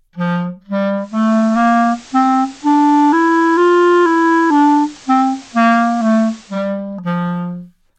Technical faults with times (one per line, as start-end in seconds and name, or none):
0.95-6.73 digital radio blending to analogue